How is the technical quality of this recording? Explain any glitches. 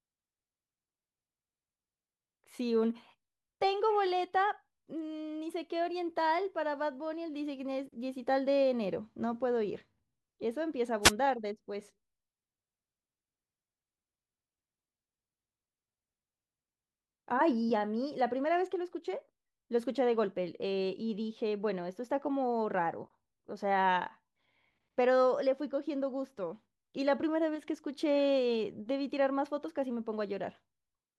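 One glitch mars this speech recording: a wireless microphone noise hit from 11.02 to 11.12 s. The analogue FM radio link faded as reflected signals cancelled, so receiver noise swelled for about a tenth of a second, heard as a brief swish of static over the voice.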